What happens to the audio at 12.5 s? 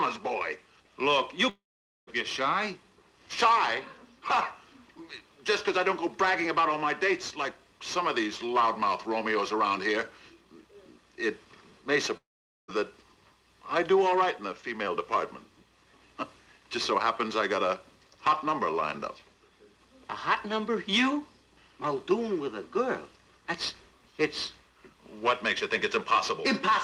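A likely stall in the incoming stream causes a long network dropout from 12.17 to 12.70 s. With about half a second never arriving, the receiver stretches the last sound into a fading buzz that sinks to near silence, then resumes without the lost stretch.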